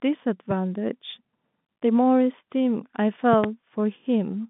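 A sudden voltage step, likely from a plug, switch or static discharge, enters the signal twice. It causes a single loud pop at 0.51 to 0.53 s, then two pops in quick succession at 3.33 to 3.46 s, each peaking some 15 dB above the speech, which continues underneath.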